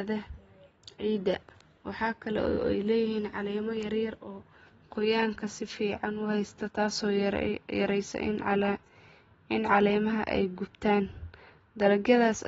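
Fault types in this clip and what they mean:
AAC compression: The whole clip sounds dull and smeared. Nothing comes through above 7.6 kHz, so the top of the speech is just gone, and sibilants and held sounds pick up a watery, fizzy warble. That's likely AAC-LC coding at a low bitrate, something around 24 kbps. The encoder spends its few bits where the ear is most sensitive, drops the high band entirely and quantises the rest coarsely, leaving spectral holes that shift from frame to frame.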